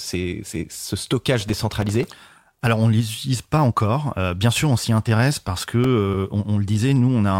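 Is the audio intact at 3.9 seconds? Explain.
Yes, at 3.9 seconds the speech plays through cleanly, with no dropout, click, distortion or other fault to be heard at that moment.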